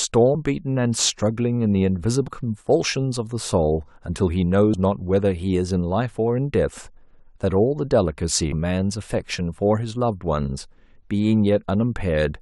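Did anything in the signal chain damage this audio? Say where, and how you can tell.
Yes, at the codec stage. At 2.28 s the speech jumps forward by about a tenth of a second. That is compressed frames skipped: about four 26.1 ms frames never decoded.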